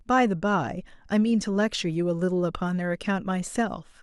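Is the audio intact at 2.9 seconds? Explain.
Yes, the audio is intact at 2.9 seconds, with no fault present at that moment.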